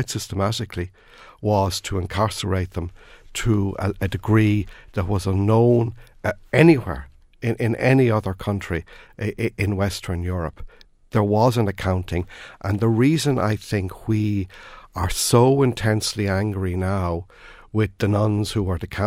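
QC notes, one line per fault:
Nothing here to flag; the speech runs along without a single thing worth noting.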